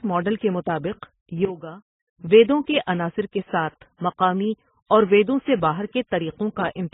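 From start to finish the speech sounds muffled, with nothing above about 3.8 kHz, so the sibilants are dull and blunted. Several kinds of codec artefact are layered together. That mix most likely comes from transcoding between lossy codecs. Each low-bitrate encoder spent its bits re-coding the previous one's damage while adding its own, and the lowest bandwidth limit survived the whole chain.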